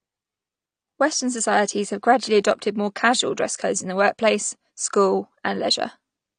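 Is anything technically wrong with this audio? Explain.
Yes. AAC compression runs through the whole clip: the speech sounds dull and smeared, with nothing above about 9.7 kHz and a warbling, fizzy texture on sibilants and held sounds. This is likely AAC-LC coding at a low rate, which fits roughly 32 kbps. The encoder had too few bits, so it lowered the bandwidth limit and quantised each frame's frequency lines coarsely, leaving gaps and noisy fill in the upper spectrum.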